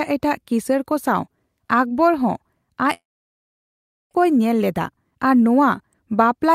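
From 2.93 s to 4.17 s the sound smears into a brief fading buzz, then goes silent for about 1.09 s before resuming with roughly 1.02 s of material gone. This is likely a long network dropout. On a spectrogram, a short smeared tail gives way to an empty band.

From 4.24 s to 5.49 s a jitter buffer speed-up plays the audio at 111% speed with pitch unchanged, trimming about 150 ms of the built-up delay. It sounds hurried. On a spectrogram, the harmonic spacing stays constant while syllables look compressed in time.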